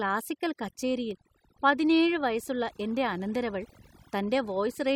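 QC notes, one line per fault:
Throughout: overdone noise removal. Aggressive band gating mutes quiet voice detail, leaving a lowered background with twinkling specks, and spectrogram gaps with isolated tonal flecks.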